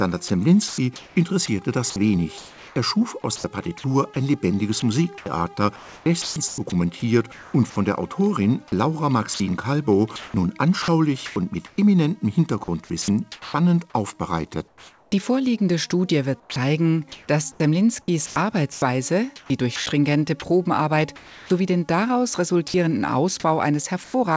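Sound chopped by the voice detector runs from 0.28 to 7.76 s, again from 9.34 to 11.78 s, from 12.64 to 13.54 s and from 16.40 to 19.86 s. The likely cause is a sender's detector toggling between sending and muting, so quiet edges of the sound keep being swapped for comfort noise: nearly 1.9 s in total in the first stretch and shorter amounts later. The result is choppy.

Comfort noise in place of the background appears from 14.68 to 15.12 s and from 21.16 to 21.50 s. Transmission likely paused during a lull, and the receiver filled it with steady, featureless noise about 2 to 3 dB quieter than the real background it replaces.

Sound dropped by the voice detector occurs at 22.68 s, lasting 60 ms, and at 24.04 s, lasting 100 ms. Here the detector likely mistook faint sound for background and stopped sending. Brief bits of the sound vanish into steady noise before returning.

Throughout, nothing is heard above 8 kHz, which fits a G.722 call path.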